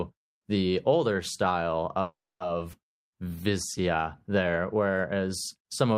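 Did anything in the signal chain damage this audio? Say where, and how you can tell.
Yes. At 2.01 to 2.42 s, after "the older style", a call audio freeze likely came from delayed network packets. Sound fades into about 270 ms of silence, then resumes.

At 2.72 to 2.75 s, still following "the older style", a skip ahead drops roughly a tenth of a second. The network or an overflowing jitter buffer discarded it.

From 2.92 to 3.83 s, a jitter buffer slow-down repeats pitch periods. Speech plays at 91% speed, same pitch, gaining 92 ms of reserve.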